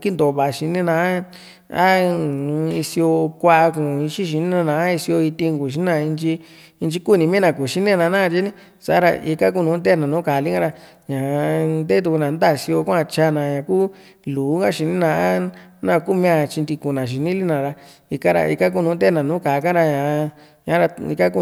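No technical faults are audible anywhere in this recording.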